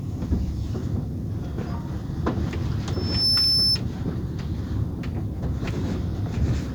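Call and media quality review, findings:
Loudspeaker feedback squeal, 2.93–3.78 s: a pure tone at 5.3 kHz swells over about a third of a second to a few dB above the program audio. The mic is hearing its own speaker and loop gain tops unity at that frequency.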